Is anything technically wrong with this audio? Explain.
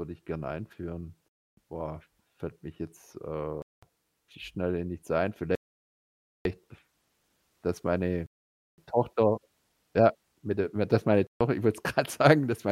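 Yes. The speech drops to dead silence five times. These are Bluetooth stalls, likely from interference starving the headphone buffer until resent packets arrive. The gaps fall at 1.28 s after "ich gerne einführen" (0.29 s), 3.62 s after "mich jetzt äh" (0.2 s), 5.55 s (0.9 s), 8.26 s (0.52 s) and 11.27 s after "mit d dass meine" (0.14 s). The waveform shows flat silent blocks, and the spectrogram shows empty vertical bands before the speech resumes abruptly.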